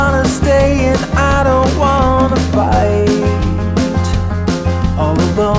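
Nothing in the recording stood out as a technical problem on listening.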